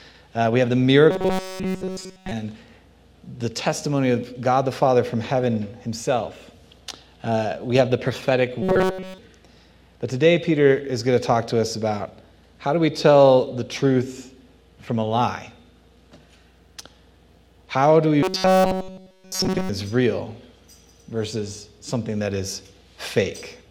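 Robotic sound from repeated short buffers at 1.11 to 2.31 s, 8.62 to 9.18 s and 18.23 to 19.69 s: a rigid metallic buzz at 188 Hz, likely from a single 5.3 ms fragment looping in place of nearly all the incoming audio.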